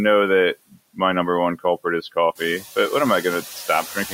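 A noise suppressor runs throughout, pulling down the bands it judges to be steady noise by about 13 dB, frame by frame. These noise suppressor artifacts leave the background sinking in the pauses and rising under the speech. The room noise steps up by about 11 dB at roughly 2.5 s and sits about 15 dB below the speech after that. From 3.68 s to 4.13 s, the suppressor mistakes part of the speech for noise and turns it down with the background, by as much as about 11 dB. Only about a tenth of a second is affected in total, but this speech cut by the noise suppressor makes the soft sounds near the end seem swallowed and faint.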